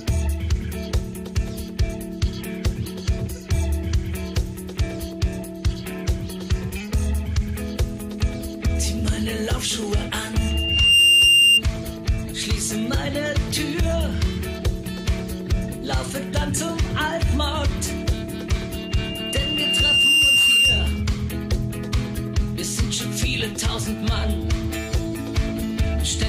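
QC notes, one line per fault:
10.38–11.62 s: loudspeaker feedback squeal. A single steady tone at 2.8 kHz rises out of the sound over roughly half a second and then holds at about 10 dB above the programme until it stops. The microphone is picking up its own loudspeaker, and at 2.8 kHz the loop gain goes above unity, so that one frequency keeps recirculating and growing on its own until the loop is broken.
18.72–21.03 s: loudspeaker feedback squeal. The same 2.8 kHz tone returns, this time creeping in more slowly over about a second and a half before reaching roughly 10 dB over the signal and lasting about 2.3 s. Because the frequency matches the first event exactly, the same acoustic path is likely at work, with the gain margin at that frequency apparently lost more gradually.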